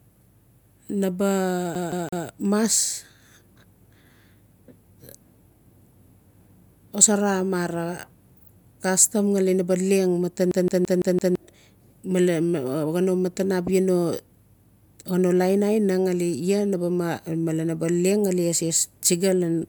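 A fast, even stutter repeats the same 0.17 s slice of speech three times from 1.75 to 2.26 s, then five times from 10.51 to 11.35 s, with brief mutes at each jump. This is a CD stuck on one turn: a scratch throws the laser back a track every revolution.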